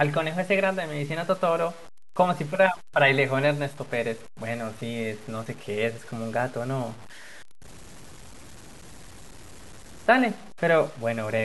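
Low bit depth without dither runs from start to finish. The speech carries a grainy distortion, roughly 25 dB below the signal, that rises and falls with it, and quiet passages turn gritty. This likely comes from truncation to about 7 bits without dither.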